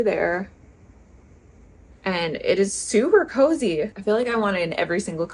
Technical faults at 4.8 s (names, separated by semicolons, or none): none